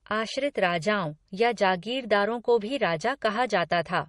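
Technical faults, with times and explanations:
Throughout, transcoding between lossy codecs: the speech has no content above 10.6 kHz and carries two layers of coding artefacts at once, likely from a low-rate MP3 encode, around 40 kbit/s, re-encoded as Opus near 48 kbit/s, the later codec spending bits on the earlier damage.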